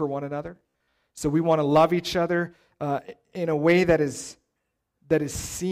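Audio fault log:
0.56–0.97 s, robotic sound from repeated short buffers: just after "one another", fresh audio likely arrived too seldom, so playback kept looping a 15 ms slice, with about half the passage repeated rather than new. This stamps a rigid, metallic 66.7 Hz buzz onto the speech.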